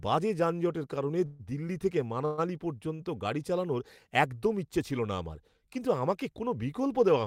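A speech clip with two call audio freezes and one short stall from a late packet. The first freeze runs from 1.25 to 1.41 s, right after "বাজে যানজটের কারণে" and before "দিল্লি থেকে". The second runs from 2.25 to 2.40 s, after "যানজটের কারণে দিল্লি থেকে". In each, the last sound is drawn out as a fading buzz for roughly 140 ms and 125 ms, with no true silence. Then the speech resumes where it left off, so nothing is lost but the timing slips later. This is likely the jitter buffer running dry while packets were held up in transit. On a spectrogram each freeze shows as a smeared, decaying band of repeated spectral content that breaks the normal speech texture. The waveform shows a repetitive, tapering stretch. The short stall comes at 2.96 to 3.01 s, just before "গাড়ি চালানোর একদম ইচ্ছে". A packet arrived late, so the receiver stretched the preceding sound by 32 ms with a slight buzzy dip before continuing from the same point. 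It appears as a brief horizontally smeared sliver on the spectrogram and a small sagging, periodic patch in the waveform.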